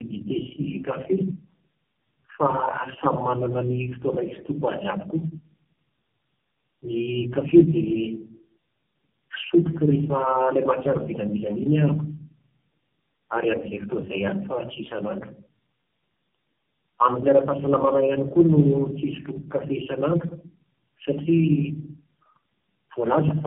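Tandem speech coding runs the whole way through. Each codec re-encoded the previous one's damage, leaving the speech rough, warbly and muffled, with nothing above 3.7 kHz.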